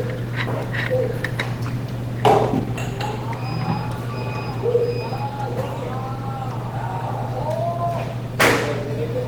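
A recording of sounds carrying plainly audible Opus compression throughout: textures come out grainy and hoarse, with a rough, noise-filled quality rather than swirling. Content still reaches about 20.2 kHz. The likely cause is Opus in hybrid mode at a starved rate, consistent with roughly 16 kbps.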